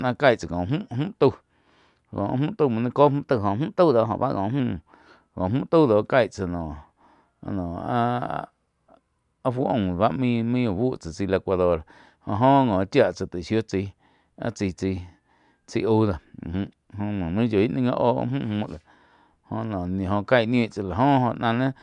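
Wrong sample rate affects this speech from 3.22 to 4.60 s, right after "tau muo nai". The audio plays about 1.09 times too fast and about 1.5 semitones sharp, which fits 22 kHz material played back at 24 kHz without conversion.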